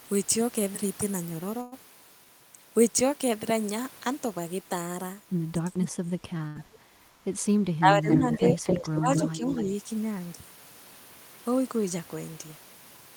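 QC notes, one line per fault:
1.61–1.74 s, call audio freeze: the sound at 1.61 s is stretched into a fading buzz or hiss for about 106 ms, and then the audio carries on from the same point with nothing lost, only shifted later. The likely cause is packets held up in transit, leaving the jitter buffer empty. A spectrogram shows frozen, smeared harmonics through the gap.
5.64–6.81 s, 7.79–8.59 s, 8.98–9.10 s and 9.26–9.48 s, speech suppressed in double talk: the talker dips or breaks up in pieces, by roughly 25 dB at the first and deepest point, about 15 dB at the next two and about 5 dB at the last. This is likely an echo canceller turning both directions down while both sides speak. The waveform shows ragged, gated envelope drops.
6.37 s, short stall from a late packet: the sound is held a moment too long, about 19 ms of stretched material, before picking up where it left off. A packet arrived late and the jitter buffer briefly emptied. 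The spectrogram shows a thin, repeated vertical slice.
6.47–6.57 s, burst of packet loss: the last sound is continued for about 79 ms and fades into a buzz or hiss. The audio then resumes further on, with about 80 ms missing. The waveform shows a decaying envelope and then a jump in content.
8.10–8.99 s and 9.15–9.73 s, echo leak: a copy of the talker arrives about 267 ms late, at roughly equal level in the first stretch and about 5 dB down in the second. This is likely loudspeaker pickup that the far end's echo canceller didn't remove. A spectrogram shows duplicated harmonic patterns offset in time.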